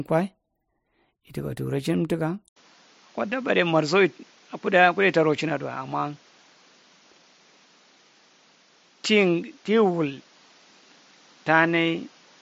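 At 2.48 s the speech breaks for about 80 ms and then continues to the end with nothing above 7.6 kHz, a few decibels quieter, over a new background noise about 35 dB below it. This is likely an input switched to a poorer device. A codec or filter narrowing the band would not also bring the gap, the level drop and a different noise floor all at the same moment.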